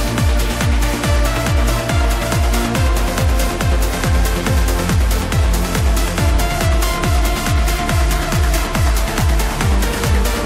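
No technical faults can be heard anywhere in the audio.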